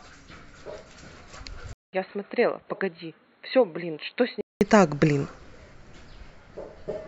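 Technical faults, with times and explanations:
1.73–4.61 s, input switched to a poorer device: likely a change to a narrower microphone path, so the speech turns dull and boxy with nothing above 4.2 kHz, drops roughly 10 dB, and has a 200 ms gap at the switch.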